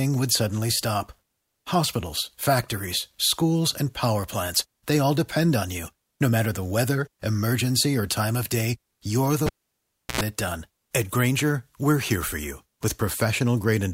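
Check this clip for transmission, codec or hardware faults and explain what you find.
One hardware fault is present. From 9.46 to 10.21 s, a cable is pulled and plugged back in. A pop cuts the speech to near silence for about 0.7 s. Then a 92 ms burst of 60 Hz mains buzz comes as the bare tip touches first. A second pop brings the sound back.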